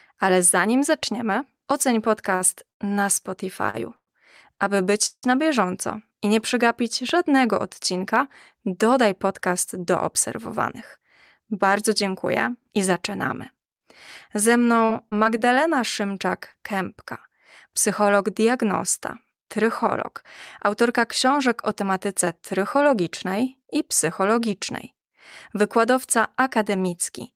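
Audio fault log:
2.35–5.25 s, repeated stalls (stutter): right after "ale zanim zaczniemy oceń" the speech keeps hitching, six times in under three seconds, before it picks up again at "na bieżąco i nie". Packets were showing up late, so the buffer kept running dry and the receiver stretched the last sound to cover about half a second in total, the longest wait around 168 ms. Nothing's actually lost, but the phrase drags and stammers.
7.09 s, loud pop: a single sharp pop lands just after "bieżąco i nie przegapić", standing about 10 dB above the speech, which carries straight on underneath into "odcinka dodaj podcast do". It's a short pulse, most likely a voltage spike from a plug, switch, static discharge or a driver glitch getting into the signal somewhere along the chain.
10.52–12.79 s, 19.34–22.91 s and 26.73–27.31 s, jitter buffer speed-up: three stretches where the speech runs a touch fast at normal pitch, first right after "odcinka dodaj podcast do" at about 105% speed, then around 103%, then a short burst near the end at about 106%. 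After late packets piled up, the receiver trimmed its backlog by snipping out tiny pitch-period slices, roughly a tenth of a second in the first stretch, 150 ms in the second and 40 ms in the last, so the first and last stretches come across slightly hurried.
14.85–15.40 s, repeated packet loss (robotic sound): four dropouts in about half a second, none longer than 40 ms, give the speech a choppy edge there. Each hole got patched by continuing the previous sound, about 93 ms of fill altogether, but roughly 80 ms of real audio never arrived, so bits of the speech are simply gone and the next gap comes before it settles.
16.52 s, short concealed packet loss: a blip of about 20 ms went missing and was filled by extending what came just before, then blended back in. You hear it as a quick smear or wobble in the speech rather than a clear gap.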